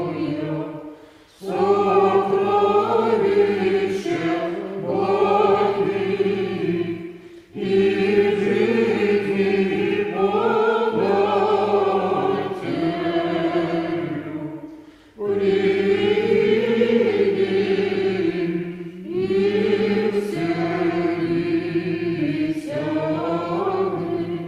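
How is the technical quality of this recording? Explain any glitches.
The technical quality of the recording is sound, with no glitches to explain.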